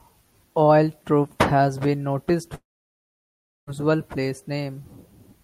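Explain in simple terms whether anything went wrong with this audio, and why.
Speech cuts out at 2.55 s and returns at 3.70 s. About a second of silence replaces it. This is likely a long network dropout.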